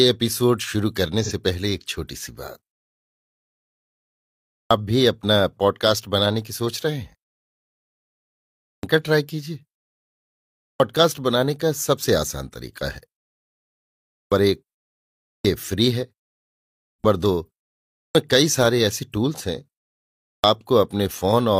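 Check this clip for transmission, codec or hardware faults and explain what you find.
Two faults are present: one brief codec dropout and repeated clipped onsets after pauses.

AAC frame loss with concealment at 1.24 to 1.32 s: about 43 ms, fitting a single lost frame, was filled from the previous spectrum, producing a short smeared, noisy patch.

Clipped start after a pause at 4.47, 8.62, 10.57, 14.12, 15.25, 16.82, 17.94 and 20.2 s: after silences of 0.5 to 1.9 s, the output device wakes late and swallows roughly 200 to 240 ms, so speech begins abruptly.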